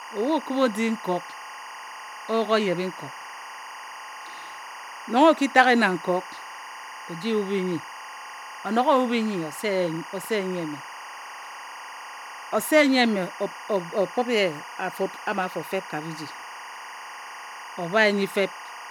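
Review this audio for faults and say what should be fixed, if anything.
There's timecode bleed under the speech the whole way through: a chirpy warble switching around 1 and 2 kHz, roughly 15 dB down, which fits 23.976 fps LTC. Keep the timecode track or cable well isolated from the audio path.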